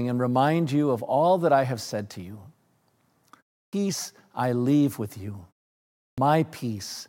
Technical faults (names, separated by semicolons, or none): clipped start after a pause